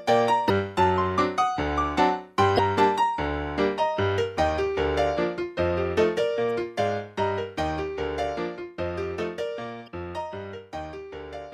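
Damaged data in a compressed stream corrupts frames at 0.46–0.50, 2.56–2.60, 6.47–6.49 and 9.84–9.88 s; the decoder loses sync on each, producing a brief chirp, squawk, click or short hole.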